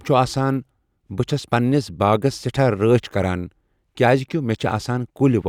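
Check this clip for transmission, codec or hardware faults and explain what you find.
Nothing stood out on listening to this speech recording.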